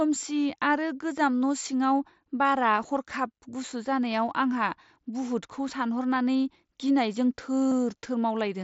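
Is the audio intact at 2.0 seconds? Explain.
Yes, the speech at 2.0 seconds is intact, carried through the mSBC Bluetooth headset codec as usual, with nothing breaking up or dropping out at that point.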